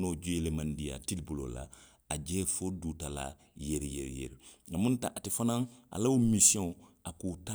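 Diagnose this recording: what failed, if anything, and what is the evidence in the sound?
Nothing failed in this recording; the sound gives no evidence of a fault at any stage.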